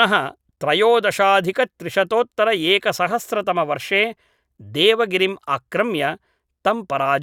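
Nothing in this stretch of speech stands out as a technical fault, so there's no problem to point to anywhere along the way.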